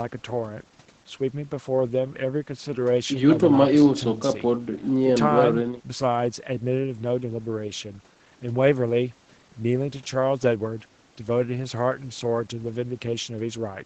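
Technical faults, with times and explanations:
No technical faults, so there are no times or explanations to give.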